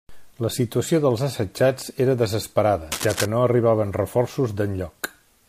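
A speech recording. Cable scratch noise appears from 2.92 to 3.26 s: a burst of scratchy, uneven rustling close to the level of the voice. It is likely caused by a worn cable or connector being moved.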